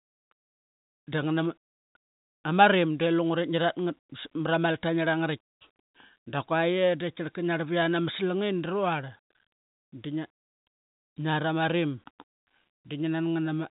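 No faults in the speech; the G.711 telephone coding path does its expected job, capping the band at 4 kHz with at most a faint level-following quantisation hiss.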